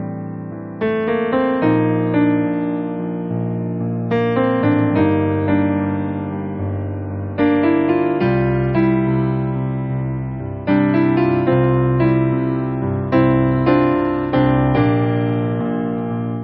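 Nothing goes wrong here at any point, so there's no fault to report in this clip.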